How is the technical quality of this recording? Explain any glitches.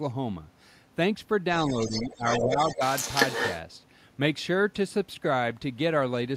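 The quality is compromised by echo problems in a stretch of about two seconds near the start of the speech.

From 1.67 to 3.6 s you can hear the other side's voice leaking through, only a few decibels under the talker. The far-end audio is likely coming out of the talker's loudspeaker and being picked up by the mic, with the echo canceller failing to strip it out.

Inside that stretch, from 1.86 to 2.23 s and again from 2.44 to 2.82 s, there's speech suppressed in double talk. The talker's level ducks by around 10 dB in patches adding up to a couple of tenths of a second each time. With both sides talking at once, the canceller likely couldn't tell the talker from the echo and turned both down.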